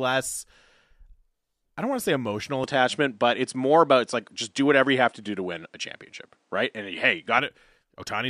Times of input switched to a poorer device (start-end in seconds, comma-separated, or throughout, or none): 2.64-7.38